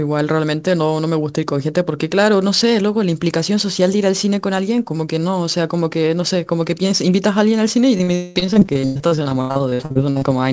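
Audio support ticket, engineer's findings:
Repeated packet loss (robotic sound), 7.98–10.24 s: 25 holes, longest 200 ms, nearly half the span patched by extending prior audio, so speech turns choppy. Jitter buffer concealment. Recurs rapidly, unlike one isolated dropout.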